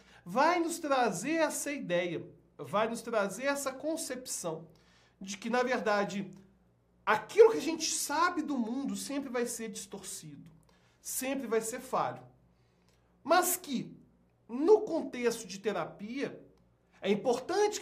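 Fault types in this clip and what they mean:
No audible faults: no dropouts, level jumps or distortion anywhere in the clip.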